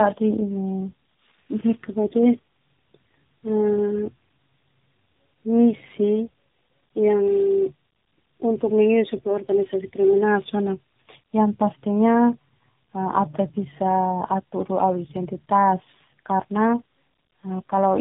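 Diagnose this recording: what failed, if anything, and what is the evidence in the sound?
The speech sounds rough, muffled and warbly throughout, with nothing above 3.8 kHz. This is tandem speech coding at the codec stage. The call appears to have passed through two speech coders in a row, which fits a low-rate G.723.1 leg re-encoded as AMR-NB across a G.711 link, each compounding the last one's damage.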